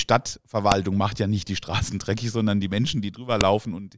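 At 0.72 s, just before "macht ja nicht die", and again at 3.41 s, a sharp, loud snap cuts through the speech: a file header played as audio. Header bytes from joined WAV pieces are read as samples, so unlike a level-dependent clipping click, it ignores the signal entirely.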